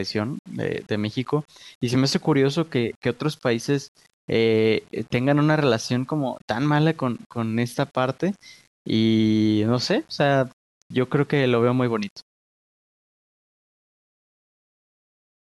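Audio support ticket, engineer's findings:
Grainy, signal-following distortion throughout the speech, roughest on quiet syllables and decays; low-level tails break up or sputter. Low bit depth without dither, likely an 8-bit rounding stage. Undithered rounding leaves error correlated with the signal, so it is heard as distortion rather than steady hiss, sitting roughly 35 dB below the speech.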